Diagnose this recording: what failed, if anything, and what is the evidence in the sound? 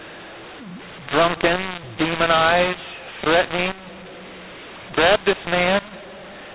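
Codec decode stage: mu-law and A-law mixed up. Mu-law G.711 bytes are read as A-law throughout, scrambling levels. The speech is harsh, and the pauses fill with noise.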